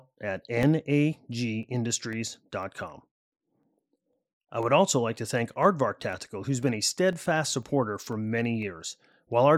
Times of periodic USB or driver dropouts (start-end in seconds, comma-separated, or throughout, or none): 0.13-9.13